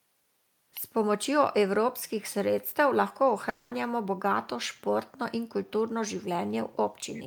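From 3.49 to 3.73 s the speech stops and a continuation of the last sound fades across the roughly 220 ms gap, then speech resumes with that stretch missing. This is likely a long network dropout, longer than a single packet-loss glitch, though concealment covers the entire gap without falling to silence.

From 7.14 to 7.22 s a faint repeat of the speech appears about 347 ms behind the original, far below the speech level. This is likely an echo leak from a loudspeaker the echo canceller did not fully suppress. It is a distinct delayed copy rather than room reverberation.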